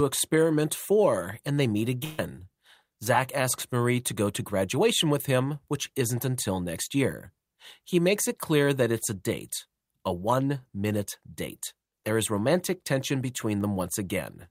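At about 2.04 s there's a burst of packet loss lasting roughly 140 ms, to 2.19 s. The receiver fills the gap by stretching the last bit of sound and fading it, so you get a brief held buzz or hiss, then the speech jumps ahead with that stretch missing.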